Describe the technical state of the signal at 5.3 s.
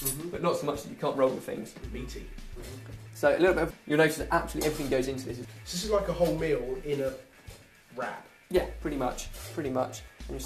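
At 5.3 s the signal is intact, with no dropout, distortion, glitch or other technical fault audible at that moment.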